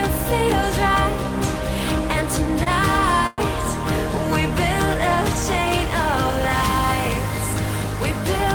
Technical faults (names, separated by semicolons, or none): short stall from a late packet; call audio freeze